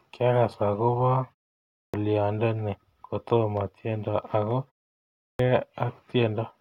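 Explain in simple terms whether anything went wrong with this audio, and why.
Speech twice starts abruptly after short pauses, at 1.65 s and 5.12 s: a clipped start after a pause. The playback device dozes off in silence and takes time to wake, swallowing about 0.29 s and 0.27 s of the opening sounds.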